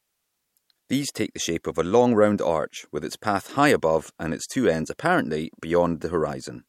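A short recording of speech, with no technical fault to be heard anywhere in it. There is nothing that calls for a time stamp or a cause.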